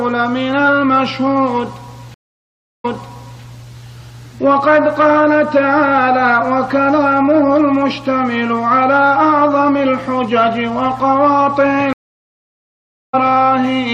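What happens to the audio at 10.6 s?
A steady low 60 Hz drone sits about 25 dB under the sound at 10.6 s, as throughout. This mains hum comes from power-line coupling through a ground loop or transformer.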